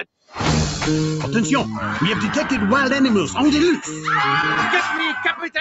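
From 0.04 to 0.35 s, sound is cut by the noise suppressor. The suppressor mistook part of the sound for noise and pulled it down, by about 17 dB at the deepest point. Roughly a fifth of a second is affected. Steady and fading parts sink or end early.

Throughout the clip there is clock drift between sender and receiver. The sender's clock runs roughly 3 percent slow against the receiver's. The jitter buffer keeps draining as a result. The receiver has to stretch the audio to avoid running dry.

From 0.93 to 5.47 s, that drift produces repeated timing corrections. The receiver inserts short repeated pieces, all in the same direction, at uneven spacing. Playback runs at about 99 percent speed, and roughly 50 ms is added overall. This is heard as faint hiccups and a slightly unsteady tempo.

From 4.42 to 5.45 s there are scattered short gaps. Roughly four packets arrived late or went missing. 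Each hole, around 10 ms at most, was filled by continuing the preceding sound. The audio stays clear but carries brief ticks or smears. The band stops near 8 kHz.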